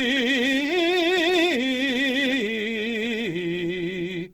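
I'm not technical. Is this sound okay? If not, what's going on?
No. From start to finish, the music carries clearly audible damage from heavy data compression, most likely Opus compression in its music mode. To save space, this kind of encoder keeps the overall loudness of each slice of the frequency range but has too little data to rebuild the detail inside it, patching gaps with borrowed or noise-like material. The result here is tones that sound rough, grainy and noisy rather than clean, although the full treble range is still present.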